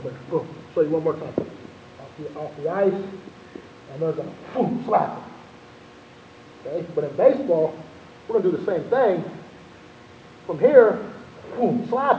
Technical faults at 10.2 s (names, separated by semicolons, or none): none